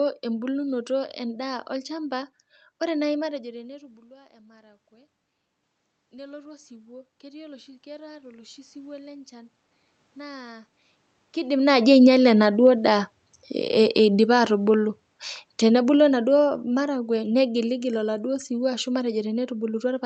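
From about 0.12 s right through to the end there's a faint, regular ticking under the speech, coming roughly ten times a second, clearest on the louder, sustained stretches. These are clock slip clicks. The likely cause is two devices running on unsynchronised clocks that disagree by a few hundred parts per million, so every tenth of a second or so the error builds up to a whole sample and one gets dropped or repeated, which fits a single-sample slip each time.

Around 3 s the talker moves and the input level drops by about 24 dB, and the automatic gain control responds. From 3.42 to 5.19 s it raises its gain by about 3 dB, and then again from 6.1 to 9.59 s by about 8 dB. This is automatic gain rising. Voice and room noise swell up together over those few seconds, because the control is gradually turning everything up as it chases the quieter input.

Then from 15.66 to 19.18 s the opposite happens: automatic gain falling. 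The control decides the input is too loud, or its background too strong, and eases its gain down by about 5 dB over three and a half seconds. The speech starts out louder and then sinks, with the background noise sinking right along with it. That shared slide is what tells you it's the gain control and not the talker backing off.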